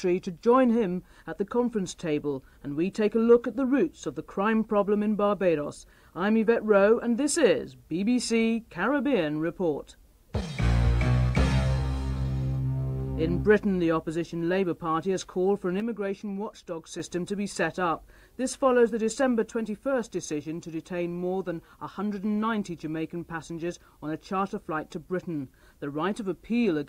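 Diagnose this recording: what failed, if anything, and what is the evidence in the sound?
A sudden gain jump at 15.8 s drops the sound and its background noise together by about 6 dB until 17.0 s. The waveform envelope steps down and back abruptly, and the spectrogram darkens evenly at all frequencies. This is likely an unramped one-bit shift at the driver or buffer stage.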